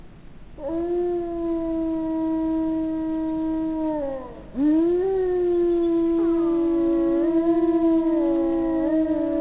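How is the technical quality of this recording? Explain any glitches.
No glitches can be heard in this recording of sounds, which has come through a telephone-grade call path with nothing above 4 kHz, consistent with a G.711 mu-law codec at 64 kbps, and the signal stays steady throughout.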